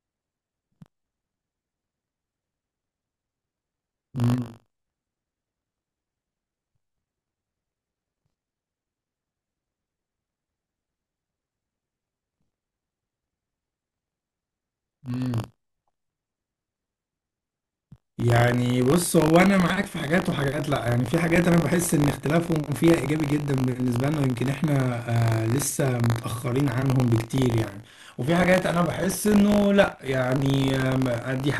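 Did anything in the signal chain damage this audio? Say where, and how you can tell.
Yes, at the driver or buffer stage: buffer tearing throughout. A 50 Hz robotic rattle rides the speech and vanishes in pauses, unlike mains hum. Each 20 ms period carries a small sliver, about 3 percent, of audio from roughly 40 ms earlier, hard-spliced in.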